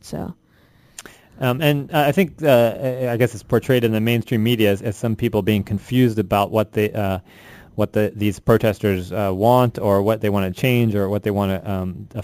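Throughout the audio, a bright metallic fizz rides on top of the sound, pointing to imaging from sample-and-hold upsampling from 16 kHz to 44.1 kHz without smoothing. The first mirror copy fills 8 to 16 kHz at about -23 dB, tracking loudness, and moves opposite to pitch, unlike steady hiss.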